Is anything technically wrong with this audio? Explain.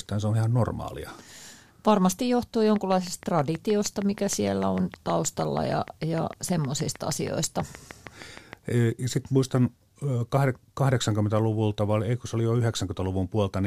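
Yes. A train of clicks runs from 2.76 to 8.54 s: about 40 evenly spaced pulses at 6.4 per second, likely from interference by nearby equipment or a faulty connection or power supply. They tick sharply over the speech and through its pauses, standing well above the speech level.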